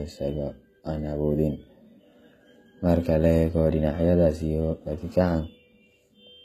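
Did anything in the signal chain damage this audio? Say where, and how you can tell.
Yes, at the codec stage, throughout: the s sounds come out gritty and lispy, and nothing sits above 14.9 kHz. That's likely HE-AAC compression at around 20 kbps, faking the treble by copying lower bands upward.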